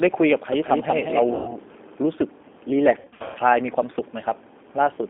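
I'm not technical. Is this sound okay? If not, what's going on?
No. The recording went through a phone-style internet call link using the G.729 codec, which squeezes speech into very little data by rebuilding it from a rough model of the voice rather than sending the sound itself. On this line nothing below about 250 Hz or above about 3.6 kHz gets through, so the speech throughout sounds thin, muffled and slightly rough, with a clearly synthetic, processed edge.

There is also VoIP packet loss concealed by the speech codec. Chunks of data went missing on the way, and the decoder covered the gaps by guessing: it repeated its last sound and let it fade. From 1.35 to 1.57 s, where about 120 ms of audio was lost, the speech is stretched into a buzzy tone or a coloured noise that fades. From 2.99 to 3.39 s the losses come in scattered bursts, the longest about 120 ms, so the voice blurs and sounds weak until it recovers.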